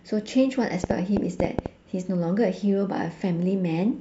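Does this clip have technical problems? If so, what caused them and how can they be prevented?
Yes. A train of clicks runs from 0.84 to 1.67 s over the speech: about seven sharp, similarly shaped pulses at an uneven pace averaging about 7.3 per second, peaking roughly 20 dB above the speech. The cause is likely electrical interference from nearby equipment or a faulty connection or power supply, injecting repeated short transients into the signal path. To prevent it, move the interface and cables away from noisy equipment, use a stable powered interface, and monitor during recording.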